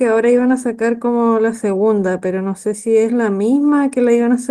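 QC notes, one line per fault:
0.99–1.01 s, lost packet rebuilt from error correction: a brief rough, noisy patch in the speech with no gap or dropout. The roughness fits one lost 20 ms packet that the decoder replaced with the low-bitrate backup copy carried in the following packet, so the sound continues but at lower fidelity.
1.97–2.03 s, lost packet rebuilt from error correction: a longer stretch of the same grainy, coarser sound, again seamless. The 40 ms of rebuilt audio points to two lost packets, each restored from its successor's reduced-quality copy.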